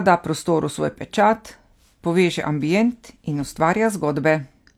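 Speech recording, with no audible technical faults anywhere.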